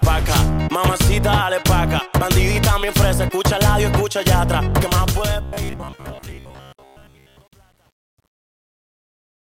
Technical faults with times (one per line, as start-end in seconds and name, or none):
4.86-9.45 truncation distortion on a fade
5.42-7.38 robotic sound from repeated short buffers